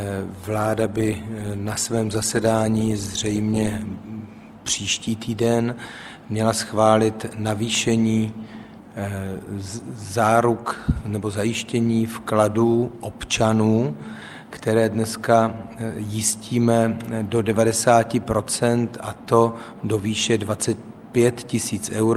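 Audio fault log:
0.39–4.21 s, call bitrate drop: bandwidth estimation fell and the encoder was told to spend far fewer bits, with a coarse floor lasting about 3.7 s, consistent with roughly 48 kbps sinking to about 18 kbps, so detail is quantised crudely and sounds rough and watery until recovery.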